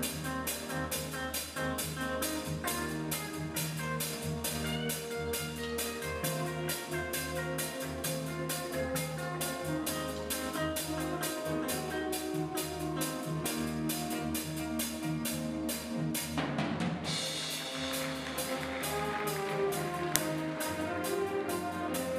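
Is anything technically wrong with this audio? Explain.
Yes. An uninitialised buffer at 20.16 s played leftover memory as samples: a loud, roughly 1.45 ms crack, consistent with a 64-sample block.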